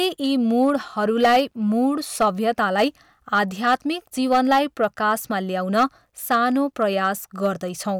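Hard clipping runs right through the speech. It's been driven about 7 dB past what some stage could pass, so the loudest peaks get sliced flat. Only around one percent of the samples hit the ceiling, and you hear it as gritty crackle on the peaks.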